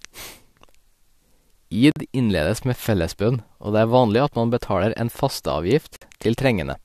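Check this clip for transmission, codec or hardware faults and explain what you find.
The speech is broken by two short dropouts, both gaps at a join of encoded pieces. At 1.92 to 1.96 s, just before "innledes med fellesbønn", a gap of 46 ms opens in the sound, and again at 5.96 to 6.02 s for 53 ms, four seconds apart, with smeared edges before the speech resumes where it stopped. Separately encoded segments were joined without trimming, so each one's encoder start-up silence and padded final frame remained at the seam.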